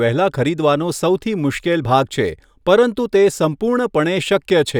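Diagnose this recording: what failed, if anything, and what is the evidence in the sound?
No faults can be heard.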